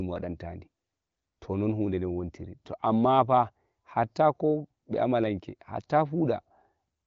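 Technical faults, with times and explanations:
No technical faults are audible: the speech has the band-limited sound of the AMR wideband (HD Voice) codec, with nothing above about 7.6 kHz, and the coding is faint enough to fit one of its higher rates, around 18 kbit/s.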